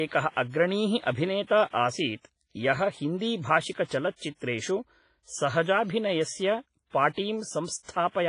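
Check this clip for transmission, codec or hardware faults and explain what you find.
One codec fault runs through the whole speech clip. The smeared, ringing quality throughout is likely WMA compression. Its long transform blocks spread quantisation noise over tens of milliseconds, giving a washy hiss that breathes with the speech. The heavy damage fits a low bitrate near 24 kbps. On a spectrogram, everything stops at 10.5 kHz, with patchy gaps where weak components were zeroed.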